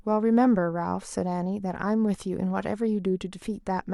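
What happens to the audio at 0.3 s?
Nothing goes wrong at 0.3 s; the speech plays through that moment intact, with no dropout, click or distortion to be heard.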